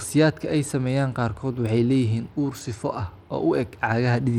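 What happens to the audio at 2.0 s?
At 2.0 s the speech sounds gritty and dull, with flickering treble and aliasing, as it does throughout. This is likely Bluetooth SBC compression starving the upper sub-bands of bits, pointing to a rate near 96 kbps.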